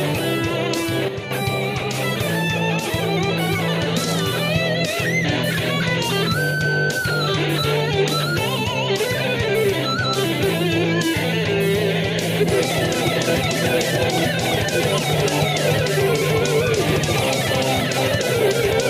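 A digital gain setting was likely applied without any ramp, producing a sudden gain jump. At 1.08 s the sound and its background noise together drop by about 8 dB in a single step, staying lowered until 1.31 s, when the level steps abruptly back.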